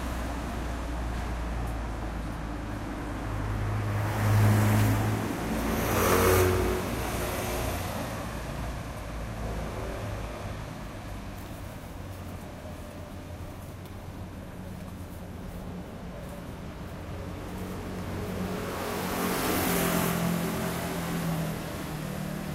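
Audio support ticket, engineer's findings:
Listened to the whole clip and found no faults, so nothing to action on our side for these sounds.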